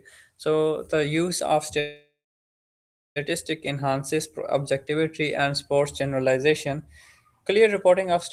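Call audio freeze at 1.79 to 3.18 s, after "the use of": late packets likely emptied the jitter buffer, so sound buzzes, falls silent for 1.03 s, then resumes unbroken.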